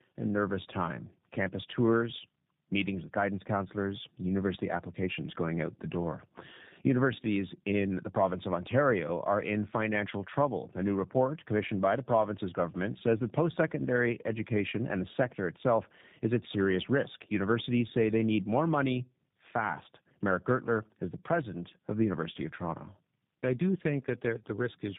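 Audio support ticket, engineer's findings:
Tandem speech coding, throughout: rough, muffled, warbly speech, nothing above 3.8 kHz. Sounds like two speech codecs back to back, probably AMR-NB then G.729A across a G.711 leg, each re-coding the last one's already degraded output.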